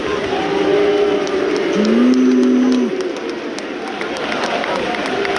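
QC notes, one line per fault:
No technical faults are audible anywhere in the clip.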